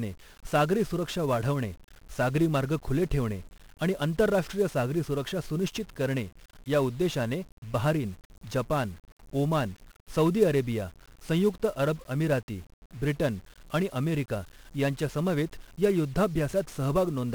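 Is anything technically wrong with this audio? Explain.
Yes. 1-bit DFPWM compression affects the whole speech recording, from start to finish. Each sample is reduced to a single bit that pushes an adaptive level up or down, so the waveform is traced only roughly and the heavy quantisation noise spreads across the entire spectrum. The damage here is severe, which fits a 48 kbps stream. The speech sounds fuzzy and crackly throughout, and its treble is dulled or replaced by hiss.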